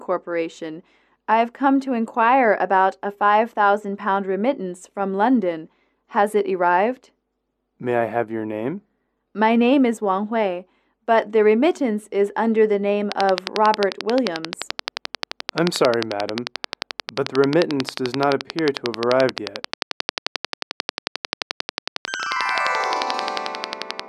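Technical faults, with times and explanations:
13.12 to 24.01 s, train of clicks: a regular ticking starts and runs to the end of the clip, with pulses arriving at a steady 11.3 per second, around 150 in all. Each click has much the same short, sharp shape and stands out roughly 20 dB above the surrounding sound, so it stays audible through quieter passages. The cause is likely a repeating electrical pulse, such as interference from nearby equipment or a faulty connection or power supply.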